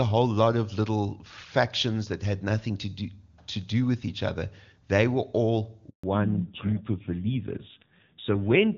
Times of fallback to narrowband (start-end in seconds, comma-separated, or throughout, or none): 6.03-8.77